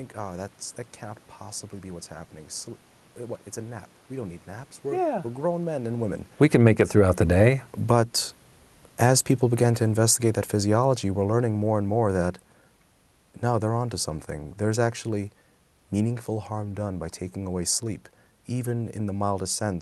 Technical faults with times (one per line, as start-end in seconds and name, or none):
6.28-16.25 automatic gain falling
6.69-9.42 automatic gain rising